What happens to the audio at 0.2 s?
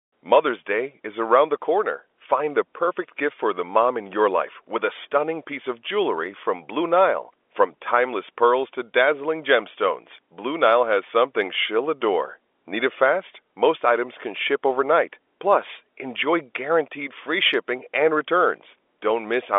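Nothing goes wrong at 0.2 s: the speech there is intact, carried through ordinary G.711 telephone coding with its usual narrow line band of roughly 300 Hz to 3.5 kHz.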